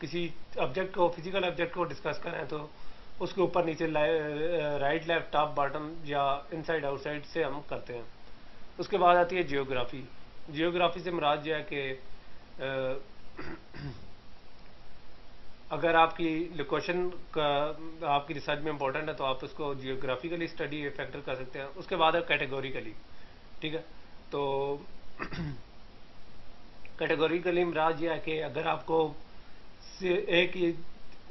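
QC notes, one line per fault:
Nothing stood out on listening.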